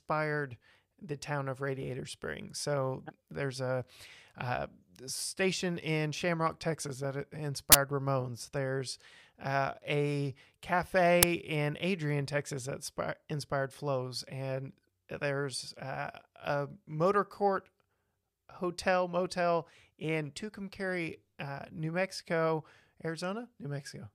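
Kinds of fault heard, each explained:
Uninitialised buffer: Blocks were played before audio was written into them, so leftover memory became samples. A burst of digital noise and a loud crack result. One at 7.72 s lasts 23 ms, fitting a 1024-sample buffer. One at 11.23 s lasts 6 ms, fitting 256 samples.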